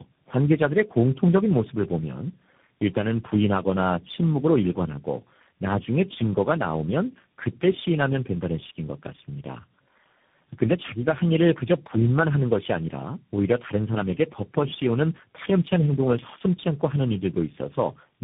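Throughout, tandem speech coding through four speech codecs in a row, ending in CVSD, stacks each stage's damage: rough, muffled, warbly speech, and a spectrogram blank above 3.7 kHz.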